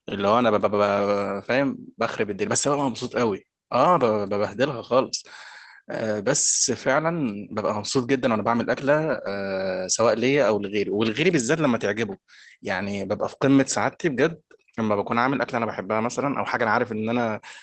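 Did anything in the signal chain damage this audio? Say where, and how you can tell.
Yes, network stage: brief rough, noisy patches at 0.55–0.57, 2.29–2.31, 4.83–4.85, 9.09–9.27 and 14.29–14.31 s. That's a lost packet rebuilt from error correction: Opus played low-bitrate backup copies. The longer 9.09 s patch points to several packets lost.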